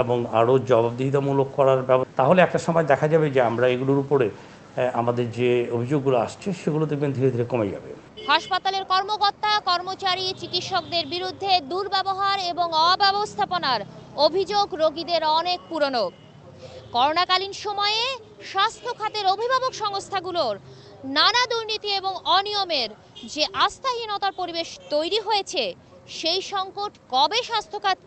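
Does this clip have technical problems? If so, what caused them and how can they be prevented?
Yes, there are two related problems, both in a call path.

At 2.03 to 2.05 s there is a skip ahead: roughly a second of audio is simply gone, and the material on either side is butted together with no gap or fill. Unlike a dropout, there is no silence or concealment noise, just an abrupt jump forward. Audio like this is dropped either in transit or by the jitter buffer when it overflows, while later audio is already waiting. Preventing it means sizing the jitter buffer for the network's worst bursts and fixing the congestion that causes them.

From 2.14 to 4.08 s comes a jitter buffer speed-up: the sound runs at about 107% of normal speed, with around 150 ms trimmed away in small pitch-period slices, so it feels hurried while pitch stays put. That unchanged pitch is what separates it from a resampling or clock-rate error, which would shift pitch along with tempo. 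The buffer was draining excess held audio. A steadier network, or a slower, gentler catch-up policy in the receiver, would prevent it.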